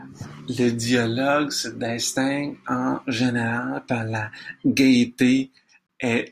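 A speech clip with a gap at a join of encoded pieces: two separately encoded sections were butted together without trimming the encoder's start-up delay and final-frame padding, so a gap of about 26 ms cuts into the speech from 5.87 to 5.89 s, with smeared edges, before the talking resumes exactly where it stopped.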